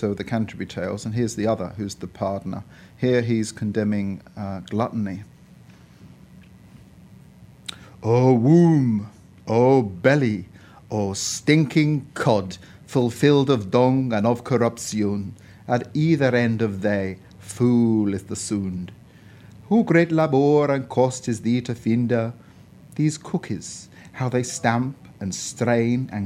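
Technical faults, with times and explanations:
No technical fault can be heard anywhere in the signal, which has no breaks, distortion or added noise.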